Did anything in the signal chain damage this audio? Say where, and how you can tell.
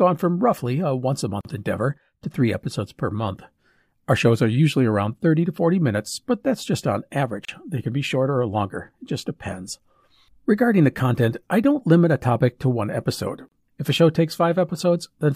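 Yes, at the codec stage. Separately encoded pieces were joined without trimming encoder delay and last-frame padding, leaving a gap at a join of encoded pieces every 6 s. The speech breaks off in a gap of 42 ms at 1.41 s and 34 ms at 7.45 and 13.49 s, then resumes where it stopped.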